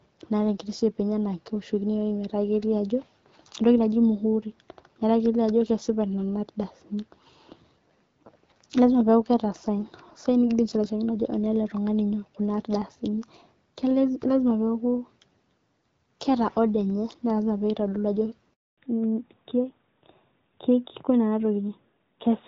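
At 18.54 s the speech cuts off abruptly and stays silent for 240 ms, until 18.78 s. This is a handover gap: while the call switched from one network to another, no speech frames got through, so whatever was said then is missing.

When the speech resumes at 18.78 s it sounds duller and rougher through to the end, with nothing above 4 kHz. This is a fallback to narrowband. After the handover the call dropped out of HD Voice, where the light AMR-WB coding at around 12.65 kbit/s had kept the speech clear. The sound now points to the older AMR-NB codec at around 12.2 kbit/s, which cannot carry the upper band.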